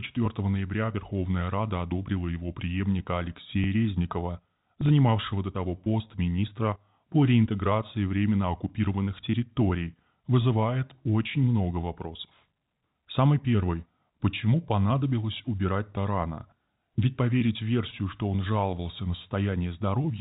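No technical faults are audible.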